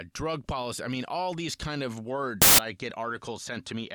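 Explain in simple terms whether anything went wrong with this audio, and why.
A sudden burst of loud hiss breaks in from 2.42 to 2.59 s, right after "all these kind of" and before "I get". These are samples built from the wrong bytes: the player stitched each sample's pieces together wrongly, so tiny jittery details became huge random values.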